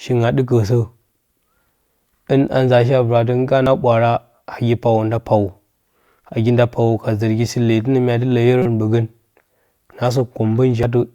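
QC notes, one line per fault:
3.66 s: damaged data in a compressed stream. A brief blip. The decoder hits corrupted bytes, misreads the frame and loses sync until the next header.
8.62 to 8.66 s: damaged data in a compressed stream. A short glitch lasting about 36 ms. The decoder fails on the corrupted frames and searches for the next valid frame.
10.83 s: damaged data in a compressed stream. A quick glitch. The decoder reads bad compressed data as sound, then resyncs at the next frame header.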